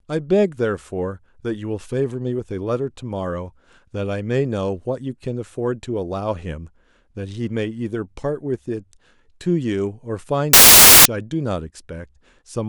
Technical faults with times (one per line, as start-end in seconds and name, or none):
10.53-11.05 samples built from the wrong bytes